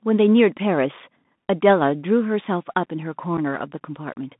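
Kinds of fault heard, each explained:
Bluetooth CVSD headset codec: The speech runs through the narrowband headset codec, which sends one up-or-down bit per sample and adapts its step size, and the damage is plainly audible. The audio is confined to roughly 150 Hz to 3.7 kHz, which fits a 64 kbps CVSD link. Sibilants sound scratchy and a granular hiss sits under the voice. On a spectrogram, energy stops at a hard ceiling near 3.7 kHz, above a grainy noise floor.
Unconcealed Bluetooth headset packet loss: At 1.24 s and again at 3.37 s, about 7.5 ms of speech vanishes, consistent with a single lost voice packet each time. Nothing was done to hide the loss, so silence or an idle pattern fills the hole, leaving abrupt edges. The speech then resumes quieter for a moment. On a waveform, each loss is a narrow notch with near-vertical sides. A spectrogram shows it as a thin vertical break across all frequencies.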